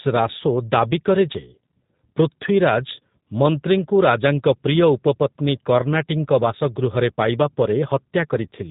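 From start to finish the speech carries plainly audible G.729 codec damage. It is rebuilt from a vocal-tract filter, a pitch predictor and a few pulses per frame, giving a rough, slightly synthetic tone that fits 8 kbit/s G.729A. A spectrogram shows nothing above 3.8 kHz.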